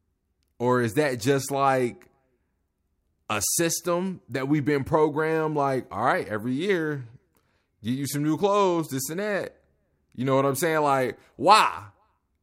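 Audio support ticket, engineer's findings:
No technical faults heard on the speech signal at any point; no component action required.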